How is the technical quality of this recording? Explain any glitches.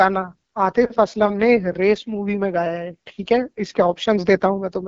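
The technical quality is limited by codec damage throughout. The AMR wideband (HD Voice) codec runs the full length of the speech at a low rate, fitting its 8.85 kbit/s mode. The speech sounds rough and raspy because the vocal tract model is fed too few pulses. Nothing sits above 7.5 kHz.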